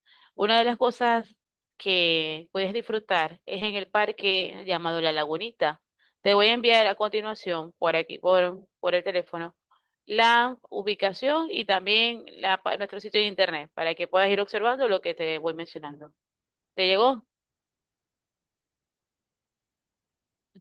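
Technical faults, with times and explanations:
3.59–3.63 s and 4.29–4.33 s, short concealed packet loss: twice in this speech, about 20 ms of audio failed to arrive at the decoder in time, and the receiver filled each gap by extending the preceding sound, continuing its pitch when voiced or substituting shaped noise when not, then cross-fading back into the real signal across a further 20 ms or so. Each patch is heard as a momentary smear or wobble, and a brief consonant can drop out.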